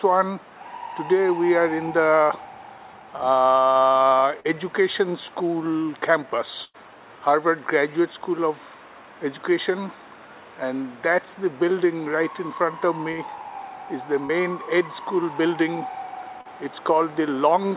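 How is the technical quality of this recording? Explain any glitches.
The recording has two kinds of network glitch. It's a narrowband call, with nothing above 4 kHz, which fits a G.711 call path.

Short concealed packet loss hits at 4.40, 14.26 and 16.41 s. Each time roughly 40 ms didn't arrive in time. The receiver patched the hole by extending the preceding sound for 33 to 44 ms and then blending back in, so you hear a quick smear or wobble.

There are two bursts of packet loss, at 6.64 s (about 100 ms gone) and 13.12 s (about 60 ms). The receiver kept the last sound going and faded it, giving a held buzz or fading hiss. The audio then picks up further along, with that stretch missing.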